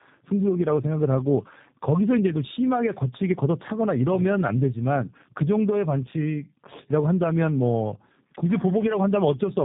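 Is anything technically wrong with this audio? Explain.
Yes. Throughout the speech the sound is rough, muffled and warbly, with nothing above about 3.8 kHz. This is tandem speech coding: the call passed through two low-rate speech codecs in a row, and the second re-encoded the first one's already degraded output, so their losses stack. The character points to AMR-NB at 7.4 kbit/s feeding G.729A at 8 kbit/s via a G.711 link.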